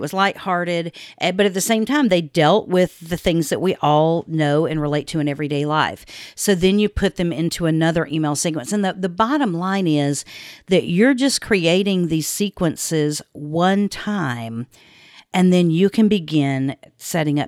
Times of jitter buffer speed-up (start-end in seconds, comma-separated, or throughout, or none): none